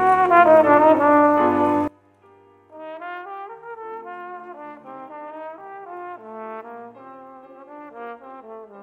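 From 1.88 s to the end, the sound drops by about 25 dB and stays there, with the background falling away together with everything else rather than the foreground alone. The likely cause is one channel inverted: one side of a stereo source had its polarity reversed, so when the two sides were summed to mono, the material they shared cancelled and only the small difference between them survived, at that much lower level.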